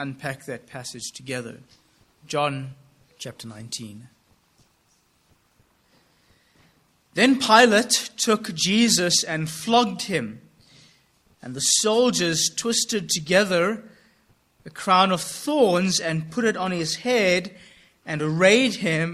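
No faults detected anywhere in the recording.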